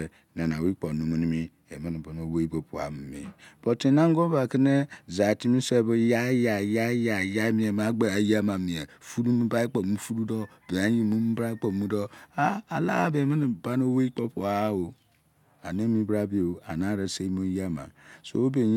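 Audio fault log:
Nothing to log here, as the speech comes across without any audible technical faults at any point.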